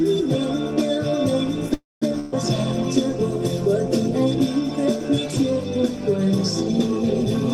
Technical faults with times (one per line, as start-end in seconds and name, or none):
1.73-2.04 call audio freeze
2.20-2.34 burst of packet loss